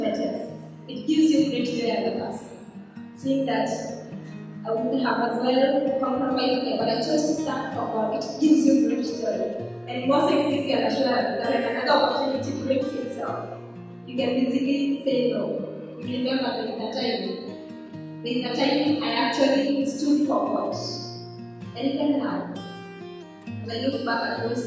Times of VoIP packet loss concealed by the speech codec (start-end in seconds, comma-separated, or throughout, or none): none